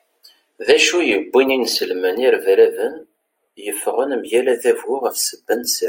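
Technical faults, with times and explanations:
Throughout, channels drifting apart: summed to mono, the speech takes on a slow, sweeping flanging as comb notches glide through the spectrum. The two channels run on separate clocks, off by about 20 parts per million, so their offset creeps to a fraction of a millisecond.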